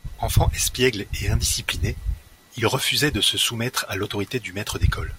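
At 2.58 s and again at 4.05 s the speech carries a single sharp click, each a thin vertical line through the spectrum. These are most likely dropped samples: under a millisecond of the stream goes missing, so the waveform leaps from one value to a later one. Unlike a dropout, no stretch of sound falls silent or goes missing to the ear; only the abrupt step in the waveform is heard.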